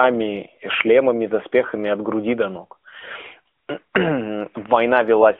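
No technical faults can be heard anywhere in the speech.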